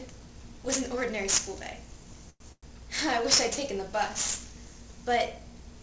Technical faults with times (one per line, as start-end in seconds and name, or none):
2.30-2.66 call audio freeze